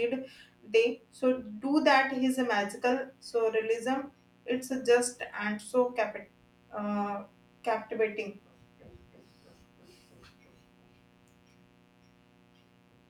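Mains buzz runs throughout the speech: sharp switching spikes locked to 60 Hz mains leak in, stacking harmonics into a steady, raspy buzz roughly 35 dB below the voice.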